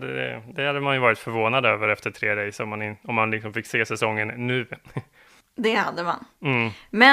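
No technical faults are audible.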